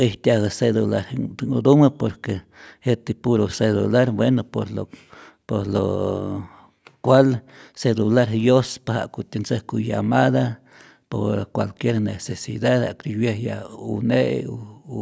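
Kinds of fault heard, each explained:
No faults detected; the speech carries the expected call microphone processing, with the lowest bass rolled off by its high-pass filter and nothing above 8 kHz, neither of which is a defect.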